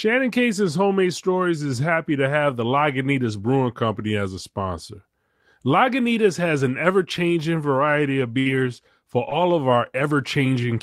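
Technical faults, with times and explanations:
8.39 to 8.47 s, burst of packet loss: the speech stretches into a fading held sound for about 60 ms, then resumes later, because consecutive packets were lost or arrived too late and about 60 ms went missing.
8.45 to 10.03 s (at 8.45, 8.49, 8.65, 9.11, 9.31, 9.71, 9.87 and 10.01 s), lost packet rebuilt from error correction: 20 ms patches of rough, noisier speech, decoded from low-bitrate backup copies carried in following packets.
9.29 to 9.33 s, short concealed packet loss: a brief smear where about 20 ms was lost and filled by extending the previous sound before blending back into real audio.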